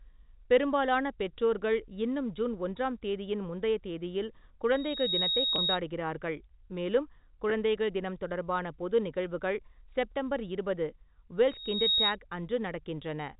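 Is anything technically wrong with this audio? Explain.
Yes. There are two kinds of fault: loudspeaker feedback squeal twice, and packet loss with pitch repetition twice.

The loudspeaker feedback squeal happens from 4.71 to 5.79 s, right after "ஒன்றாம் தேதியின் முந்தைய தேதியில்", and again from 11.49 to 12.17 s. A microphone is picking up its own loudspeaker, and at 3.8 kHz the loop gain goes above one. That tone feeds on itself and swells over roughly 0.4 seconds into a thin, piercing whistle that ends up a few decibels louder than the speech. It sits just under the 4 kHz ceiling of the telephone-band G.711 path.

The packet loss with pitch repetition happens at 5.56 to 5.58 s, inside the first squeal, and at 7.5 s, just before "தினம் தொடர்பான பொது நிகழ்வுகள்". Audio packets went missing, and the receiver covered each gap by repeating the last pitch cycle it had. The first gap is 20 ms, which points to two lost packets. 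The second is 10 ms, which points to one. Because both gaps are so short, each sounds like a brief buzzy hold on the voice rather than a dropout.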